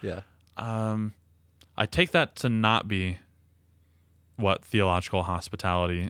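A short speech recording, and nothing technically wrong turns up anywhere in it.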